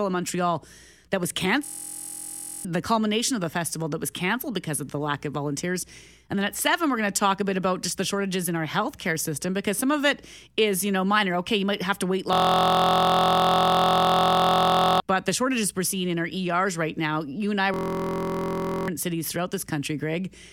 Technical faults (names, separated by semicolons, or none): system hang loop